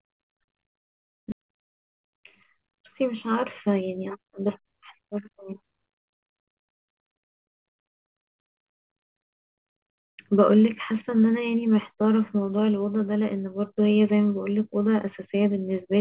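At 1.32 to 1.34 s roughly a second of queued audio was dropped, a skip ahead, so the sound jumps forward with no gap and the two sides are joined almost directly. A jitter buffer speed-up follows from 1.42 to 2.18 s: the receiver trimmed short pitch-period pieces, about 70 ms in total, to cut the backlog, so the sound runs about 8% fast at unchanged pitch and feels hurried. From 2.62 to 4.39 s it does the same again, removing about a tenth of a second, and the sound runs about 6% fast. All of this sits on a call path whose narrow band, with nothing above 4 kHz, fits G.711 coding.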